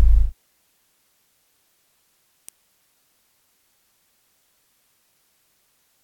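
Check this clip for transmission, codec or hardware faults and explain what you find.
One hardware-type fault stands out: an electrical switching spike at 2.49 s. A single sharp snap, peaking near -15 dBFS, sits on top of the sound. It is likely a nearby switch arcing into the line. Unlike a dropout, the underlying sound carries on unbroken beneath it.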